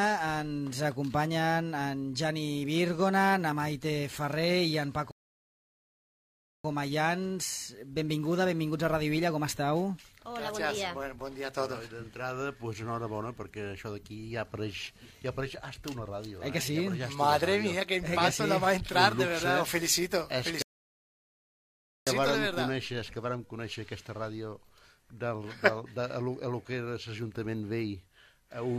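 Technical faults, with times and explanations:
5.11–6.64 s and 20.62–22.07 s, rebuffering stall: the player drained its store of downloaded audio and had to halt playback until more data came in. Each time the sound drops abruptly to silence, then picks up exactly where it broke off, with nothing skipped or repeated. The gaps add about 1.53 s and 1.44 s to the running time, so the material is intact but stretched by empty pauses.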